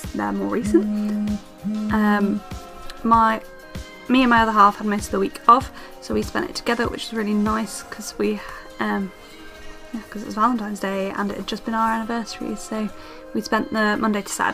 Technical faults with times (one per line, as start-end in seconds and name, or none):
none